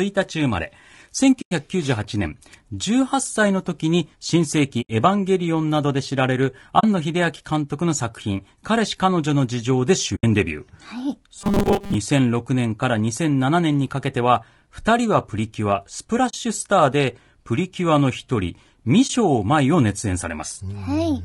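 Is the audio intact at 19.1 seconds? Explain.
No. From 19.07 to 19.1 s there is AAC frame loss with muting, a gap of about 20 ms, which fits a single lost frame. The decoder filled that frame with silence, and its overlapping windows fade the sound down into the gap and back up out of it. The result is a brief dip rather than a hard dropout. That smooth fade is what separates it from a sample-level gap or an edit, which would cut off abruptly.

Around that moment the sound is also rough and grainy, with noise filling the spaces between the harmonics and a thin, synthetic-sounding top band. This is plainly audible low-delay AAC compression, likely AAC-ELD at a rate that fits roughly 32 kbps. Its very short frames resolve pitch harmonics poorly, so the grain runs steadily through the audio rather than appearing as an isolated burst like the frame loss.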